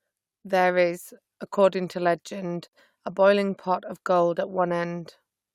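At 2.68 s the speech drops out for about 52 ms, ending at 2.73 s, and then resumes exactly where it left off: a gap at a join of encoded pieces. Two separately encoded segments were spliced without removing the encoder's leading delay and final-frame padding, so that silence stays in. On a waveform it shows as a short flat stretch with edges smeared by the codec; a spectrogram shows a vertical blank band across all frequencies.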